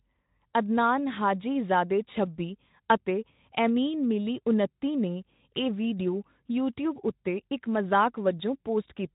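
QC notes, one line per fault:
No faults were found in this speech clip. The light codec colouring fits a Speex path at a moderate rate, around 15 kbps.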